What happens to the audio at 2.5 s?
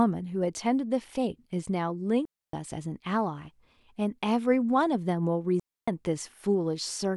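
The speech drops into a clean hole of near silence from 2.25 to 2.53 s, about 280 ms, with no noise burst on either side. This is a digital wireless dropout: the link lost too much data, so the receiver muted quickly.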